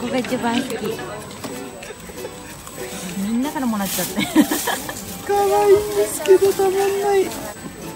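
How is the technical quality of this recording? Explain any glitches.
The recording has one technical fault, a steady high-pitched tone running under the whole clip.

USB whine, throughout: 125-microsecond microframe current pulses leak in via power or ground, giving a fixed 8 kHz whine, strongest at 16 kHz, around 20 dB below the sound.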